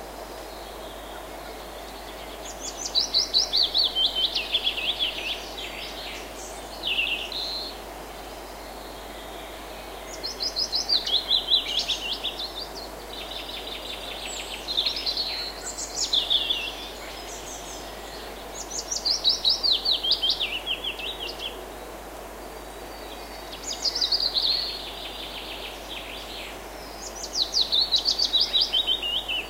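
No technical faults are audible.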